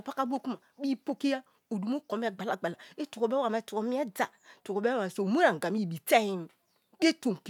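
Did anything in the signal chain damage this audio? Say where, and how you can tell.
No, nothing in the signal chain has damaged this speech recording. Listening through it, there is no point where any stage from capture to playback leaves an audible mark on the audio.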